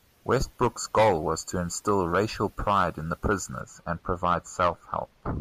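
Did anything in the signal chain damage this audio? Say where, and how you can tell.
Yes. From 3.61 s to the end at 5.40 s, the speech turns dull and muffled, its treble sloping away smoothly to about 11 dB down at 10 kHz relative to 1 kHz. That is de-emphasis applied wrongly at the converter or playback stage: a treble-cut filter acting on audio that had no pre-emphasis to undo, or applied a second time.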